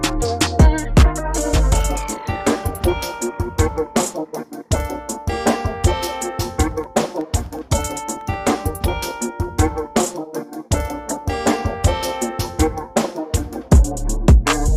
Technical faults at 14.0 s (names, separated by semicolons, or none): none